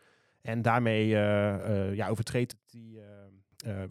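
A digital gain change was likely applied without a ramp at 2.52 s, just after "ja overtreedt". This is a sudden gain jump: the speech and its background noise drop together by about 20 dB in a single step, staying low until 3.52 s.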